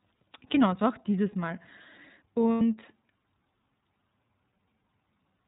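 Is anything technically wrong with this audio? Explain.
Yes. The speech runs through the iLBC codec from start to finish, and a short dropout from lost iLBC frames interrupts it once.

Throughout the clip, iLBC coding is plainly audible. This narrowband codec discards everything above 4 kHz. It rebuilds each frame's excitation on its own, so the voice sounds dull, slightly rough and synthetic. That character fits iLBC's 13.33 kbps mode with 30 ms frames.

From 2.52 to 2.61 s, about 90 ms of audio is missing. That span fits three lost 30 ms frames. The decoder filled the gap by repeating the last pitch cycle mixed with noise, which sounds like a held, buzzy vowel. The voice returns to normal almost immediately afterward.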